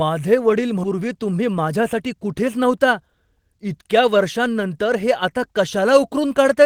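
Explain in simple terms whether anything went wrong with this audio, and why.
At 0.83 s the speech suddenly jumps forward. Roughly 0.4 seconds of talking is simply missing, and the sound on either side is butted together with no pause to mark the gap. This is a skip ahead. The receiving device had fallen behind, with newer audio already queued up, so it threw away a chunk to catch up. That chunk was either lost in transit or discarded when its holding buffer overflowed.

From 0.93 s to 3.45 s the talking sounds rushed, about 9 percent faster than normal, yet the voice's pitch stays the same. This is a jitter buffer speed-up. The buffer that smooths out uneven network delivery was holding more audio than it wanted. To shrink that delay, it repeatedly snipped out tiny slivers, each only a pitch cycle or so long. Together those slivers add up to about a fifth of a second trimmed away.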